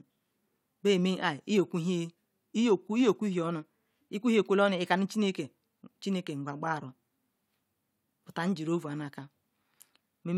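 No dropouts, clipping, distortion or other technical faults are audible anywhere in this speech recording.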